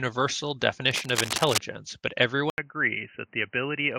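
Speech runs through this recording, and two separate faults interrupt it. From 0.91 to 1.59 s there is cable scratch noise: dense, uneven bursts of scratching and rustling laid over the speech at a level only a little below it, most likely from a worn cable or connector being moved so that its contact resistance jumps around. Unlike a dropout or clipping, nothing is removed or flattened; noise is added on top, and it stops cleanly once the movement ends. At 2.5 s the sound cuts out for about 80 ms and comes back through what is likely an input switched to a poorer device. From there to the end, nothing reaches above 3 kHz, the level sits a little lower, and a faint new background noise appears well beneath the speech. A simple low-pass filter or EQ change would not bring that brief silence, the shift in level or a different noise floor all at the same moment.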